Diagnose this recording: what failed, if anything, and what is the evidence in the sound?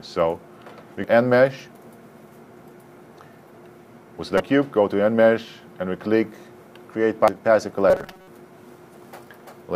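The compressed stream has damaged data, so this is a codec or storage problem. There's a blip at 1.04 s, then two more from 4.37 to 4.40 s and from 7.25 to 7.28 s, where the decoder misreads the frames, loses sync and hunts for the next header.

From 7.90 to 8.27 s the sound goes rigid and metallic, with a fixed buzz at 188 Hz. That's robotic sound from repeated short buffers, likely a driver or buffer underrun. Most of that stretch is repeats of a roughly 5 ms chunk, which fits a buffer of about that length.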